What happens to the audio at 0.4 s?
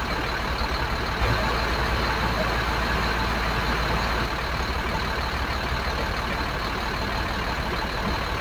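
Nothing goes wrong at 0.4 s: the sound there plays through intact, with no dropout, click or distortion.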